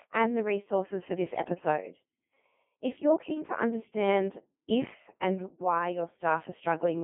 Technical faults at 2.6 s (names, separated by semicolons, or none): Codec 2 vocoder